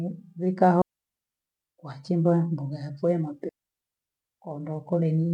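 At 0.82 s the speech drops into a clean hole of near silence for about 780 ms, coming back at 1.60 s on "wachimbua mboga ya vyee". That's a digital wireless dropout: the receiver lost too much data and muted with a very fast fade, with no noise burst around it. It happens again right after "mboga ya vyee na", from 3.49 s to 4.21 s, roughly 718 ms.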